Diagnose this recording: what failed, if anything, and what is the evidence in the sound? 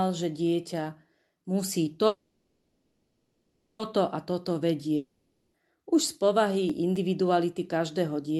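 Call audio freeze, 2.07 to 3.81 s: a network stall likely emptied the jitter buffer; a fading buzz then about 0.65 s of silence fills the wait, and speech resumes intact.

Long network dropout, 4.96 to 5.56 s: at the network stage, a decaying fill and brief silence cover the gap, then speech returns with about 0.58 s likely lost.

CD scratch ticks, 6.70 to 6.96 s: at playback from disc, three very brief ticks mark a scratch exceeding error correction on successive revolutions, with the player patching the damaged samples.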